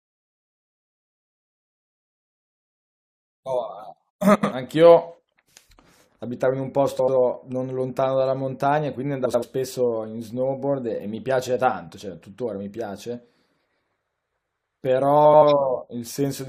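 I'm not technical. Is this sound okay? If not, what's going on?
No. The system made a frames out of order error: two neighbouring chunks of speech, each about 85 ms, were swapped and played back that way. You hear a brief garbled flutter at 4.35–4.53, 6.99–7.17, 9.25–9.44 and 15.25–15.43 seconds.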